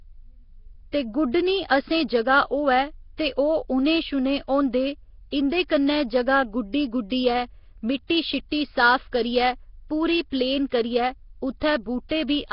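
From start to finish, the speech carries heavy coding damage: a rough, hissy halo around every syllable and a smeared, underwater feel. Nothing comes through above about 5.3 kHz. That's very likely Nellymoser compression, the old Flash microphone codec, at a rate that fits around 22 kbps. It codes short blocks with a fixed, tiny bit budget, so weaker bands get no bits at all and are filled in with noise, which is where that hiss and blur come from.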